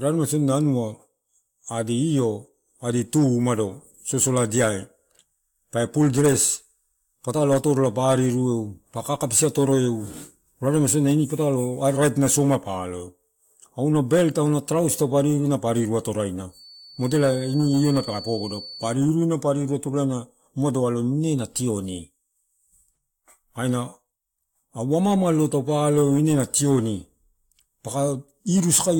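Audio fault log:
16.48–18.98 s, feedback whistle: for about two and a half seconds a thin, steady tone at 4.5 kHz sits behind the speech, roughly 20 dB under it, wobbling a little in level. The likely cause is the loop from loudspeaker back into the microphone hovering right at the edge of feedback, so that one frequency keeps ringing on its own without building up into a full howl, and then it stops.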